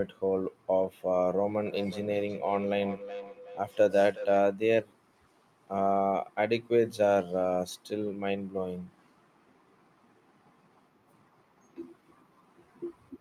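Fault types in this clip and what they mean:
Feedback echo between two devices: from 1.66 s to 4.44 s the speech comes back as a delayed copy roughly every 0.4 s, at most about 14 dB below the direct speech, with a thinner, ringing quality. Two devices in the same room are on one call; one plays what the other's microphone sent, that microphone captures it again, and neither echo canceller removes sound played by the other device, so the loop returns it.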